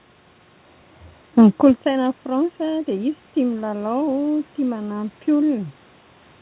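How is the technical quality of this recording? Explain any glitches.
No technical faults heard.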